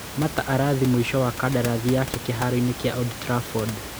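Nothing stood out on listening; the only thing beneath the speech is the room's own background noise, about 11 dB below it, which belongs to the recording itself rather than to the system.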